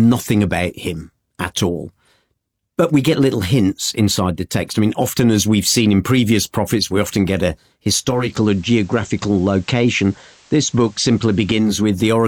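Speech, with digital radio blending to analogue FM from 7.98 to 11.94 s: a 461 ms cross-fade brings faint hiss, roughly 35 dB down.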